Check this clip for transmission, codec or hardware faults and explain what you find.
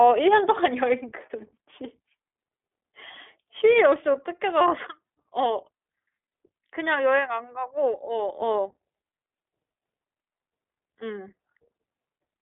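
One fault runs through the whole speech clip: iLBC codec coding. Throughout, the sound sits in a telephone band of roughly 300 Hz to 3.5 kHz, with nothing above 3.7 kHz. Each frame's excitation is coded on its own, in steps that fit 20 ms frames at about 15 kbps. That leaves a plainly audible rough, synthetic grain, which simple band-limiting alone would not add.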